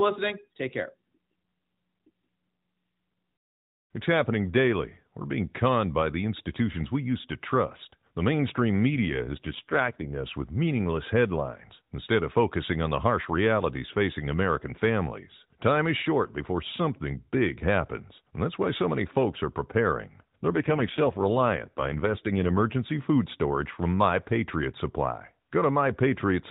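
From 8.91 to 10.10 s, ending just before "us with meaningless headlines", and again from 20.48 to 22.62 s, between "many folks are preparing" and "food storage from", the speech turns buzzier and more synthetic without losing bandwidth or dropping out. This is an AMR rate drop: the narrowband mobile codec falls to a coarser mode, which fits a step from 12.2 to 5.9 kbps, then recovers.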